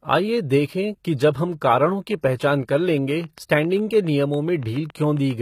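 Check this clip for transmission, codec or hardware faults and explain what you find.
Three faults in this speech clip: codec damage throughout, one pre-echo, and a run of clicks near the end.

The treble is gritty and metallic for the whole clip, and the s sounds come out lispy, which is plainly audible. That's likely HE-AAC compression at a low bitrate, something like 20 kbps. The codec keeps only the lower spectrum and rebuilds the top by copying lower bands upward, so the harmonics don't line up.

Pre-echo sits from 2.37 to 2.40 s, about 31 ms of hiss just ahead of a sharp attack. The codec spreads its quantisation noise across a whole block, so noise sized for the loud onset leaks into the quiet moment before it and smears the attack.

A train of clicks runs from 3.11 to 5.32 s: around fifteen similar ticks at a regular pace of roughly seven per second, about as loud as the speech itself. 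The likely source is interference from nearby equipment or a faulty connection or power supply injecting pulses.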